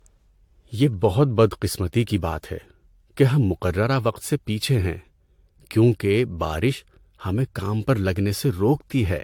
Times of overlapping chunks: none

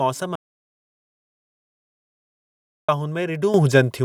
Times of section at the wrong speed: none

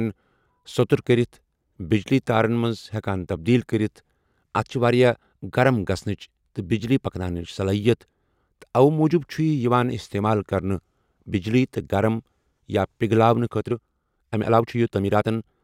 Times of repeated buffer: none

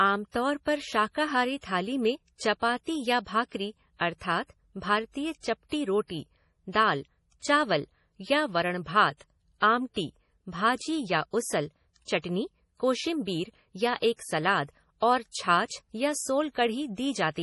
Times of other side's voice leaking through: none

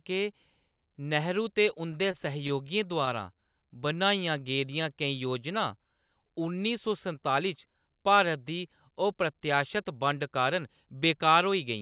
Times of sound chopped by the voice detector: none

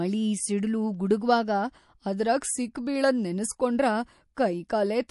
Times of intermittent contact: none

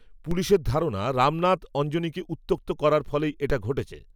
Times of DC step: 0.31, 3.50

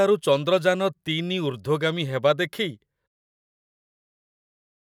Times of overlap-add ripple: none

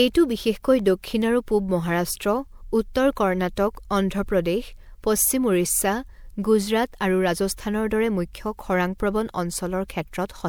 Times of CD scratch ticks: 0.58-1.22

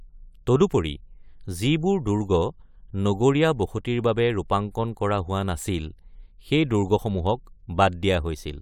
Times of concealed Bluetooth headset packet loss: none

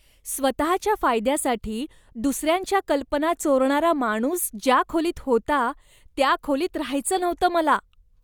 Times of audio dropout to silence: none

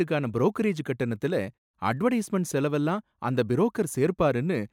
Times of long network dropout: none

